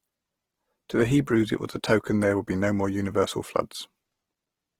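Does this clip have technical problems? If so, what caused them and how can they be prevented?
Yes. The speech has a grainy, rough texture from start to finish, as though the detail has been replaced by fizz, with no swirly holes in the spectrum and no real loss of top end. That points to Opus compression, likely running in its CELT music mode at a low bitrate, around 16 kbps. With too few bits, the encoder keeps each band's energy but fills in the fine structure with folded or noise-like content. Giving the encoder a higher bitrate, or letting it use its speech-oriented mode, would prevent this.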